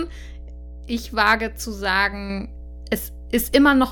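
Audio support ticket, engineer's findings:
Mains hum, whole clip. Ground loop or nearby transformer coupling the 60 Hz power line into the speech path. Steady low 60 Hz tone under the speech throughout, sitting roughly 15 dB below the speech level.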